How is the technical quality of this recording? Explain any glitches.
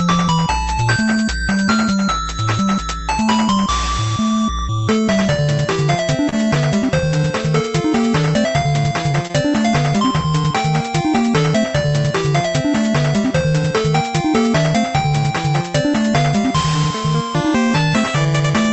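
The recording carries a few brief network glitches, clustered around 6.3 s and 9.2 s, over audio that stops at about 8 kHz, as the call codec's band limit would produce.

At 6.29 to 6.34 s, 9.12 to 9.15 s and 9.27 to 9.31 s there are short smears or wobbles. This is short concealed packet loss: about 20 ms never arrived, and the receiver extrapolated the preceding sound to fill it.

At 6.44 to 6.49 s a sound is held slightly too long, with a slight buzz or dip. This is a short stall from a late packet: the jitter buffer ran dry and stretched audio for about 27 ms, with nothing lost.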